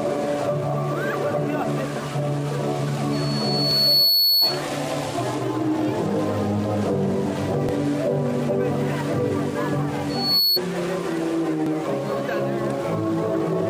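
From 3.13 to 4.63 s a 4.4 kHz tone swells over about a second to roughly 5 dB above the audio: loudspeaker feedback squeal, where the microphone re-amplifies its own loudspeaker until the loop runs away. Inside it, at 3.71 s, comes a short skip of about 20 ms, repeating at 7.69 s and 11.66 s, every 4 s. This is likely audio missing between chunks, lost as one 4-second block is closed and the next opened. Between those skips, from 10.09 to 10.59 s, the same 4.4 kHz feedback returns, rising faster, in about 0.3 s, to roughly 5 dB above the audio.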